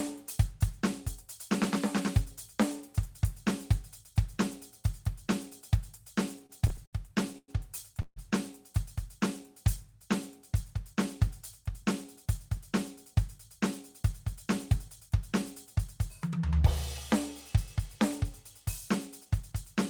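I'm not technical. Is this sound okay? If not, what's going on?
No. From 6.39 to 8.18 s the music has repeated stalls (stutter): nine times the sound briefly holds or repeats its last moment, the longest for about 0.14 s, while late data catches up. Unlike dropouts, nothing is lost; the music just drags and hiccups.

From 10.61 to 15.84 s there's a jitter buffer speed-up: tiny slivers, about a tenth of a second in all, are trimmed to catch up, so the music runs about 2% fast. The pitch stays the same, which sets this apart from a pitch shift, but the tempo loses its steadiness.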